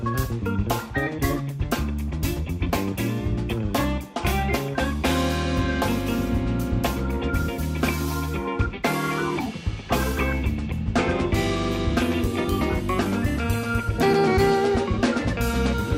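No technical faults can be heard anywhere in the recording, and the signal holds steady and intact from its opening moment to its last.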